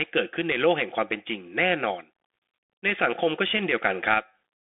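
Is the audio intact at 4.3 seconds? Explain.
No. At 4.3 seconds, as throughout the clip, the speech has passed through a Bluetooth CVSD headset codec, which fits the 64 kbps narrowband headset link. It codes each sample as a single up-or-down bit with an adapting step size, so the sound is confined to a line band of roughly 300 Hz to 3.5 kHz with nothing above 3.7 kHz. The damage is plainly audible: muffled, boxy speech with scratchy, grainy coding distortion.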